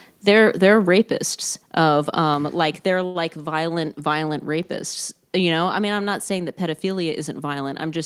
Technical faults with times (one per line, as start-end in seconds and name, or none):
1.02 microphone volume stepped down
3.05-3.17 short stall from a late packet